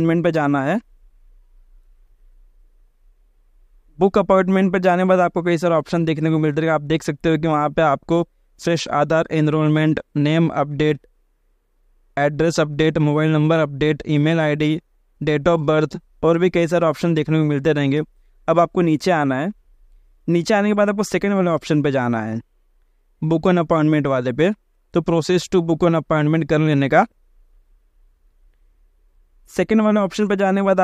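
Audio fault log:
No faults heard anywhere in this audio.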